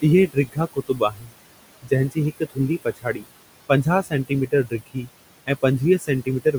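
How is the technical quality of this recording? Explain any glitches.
The recording has two related problems, both from an aggressive noise suppressor fighting room noise that sits about 16 dB below the speech.

Noise suppressor artifacts run through the whole clip. The suppressor pulls down about 20 dB in every band it reads as steady noise, frame by frame, so the background drops away between phrases and creeps back under the speech.

Speech cut by the noise suppressor happens in four stretches: 0.02–1.35 s, 1.82–3.27 s, 3.69–5.07 s and 5.99–6.54 s. The suppressor mistakes quieter parts of the speech for noise and dips them by about 18 to 21 dB, so soft sounds and word endings come out swallowed. It adds up to roughly 0.7 seconds in the first stretch, half a second in the second, a bit less in the third, and only a brief moment in the last.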